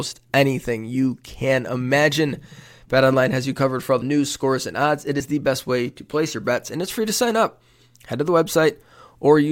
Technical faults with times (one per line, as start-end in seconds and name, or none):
5.20 compressed frames skipped